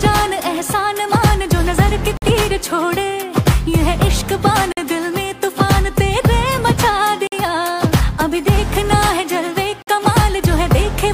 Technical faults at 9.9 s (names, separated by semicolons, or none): gap between chunks